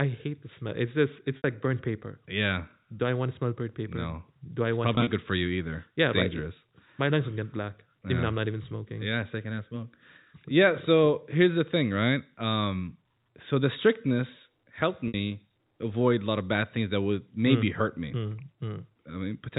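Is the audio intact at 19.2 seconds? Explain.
Yes, the audio at 19.2 seconds is intact, carrying speech through G.711 telephone coding with its usual band limit at 4 kHz.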